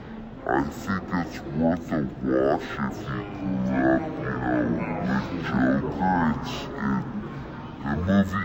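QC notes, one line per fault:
throughout: stereo read as mono. Interleaved left and right samples run as one channel, so the sound plays at 0.5x speed and 12 semitones low, a full octave. Unlike a plain sample-rate mismatch, a fainter mirrored copy also appears in the spectrum's upper half.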